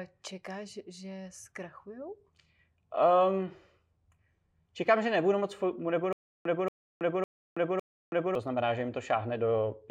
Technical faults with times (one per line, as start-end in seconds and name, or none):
6.13-8.35 stutter with silent gaps